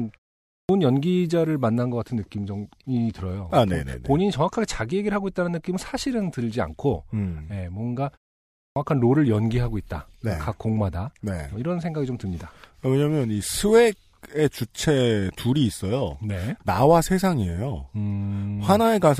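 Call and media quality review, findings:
Clipped start after a pause, 0.54 s. Speech onset swallowed, about 151 ms lost after a 0.44 s gap. Word begins abruptly. Output device sleeping in silence, slow to wake.

Clipped start after a pause, 8.63 s. Same symptom, about 132 ms lost after a 0.54 s gap. Output path relocking before audio passes.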